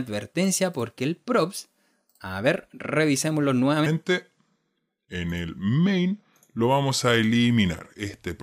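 From 3.86 s to the end of the clip, a section at the wrong speed: the audio runs at 0.813 times its original rate, so everything after that point is both slowed and lowered in pitch by roughly four semitones. The shift is abrupt rather than gradual, giving the sound a heavier, dragging, deeper character from that moment on. The likely cause is that this portion was played back or resampled against a mismatched clock during editing or playback.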